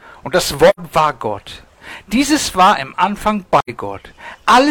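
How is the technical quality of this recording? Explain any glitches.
The recording has two brief dropouts. Both are AAC frame loss with muting. The first runs from 0.69 to 0.80 s, the second from 3.59 to 3.70 s. Each gap holds about 85 ms of missing audio, which fits two lost AAC frames. The decoder filled those frames with silence. Overlapping transform windows fade the sound out before each hole and back in after it. The result is a short, soft-edged gap in the sound.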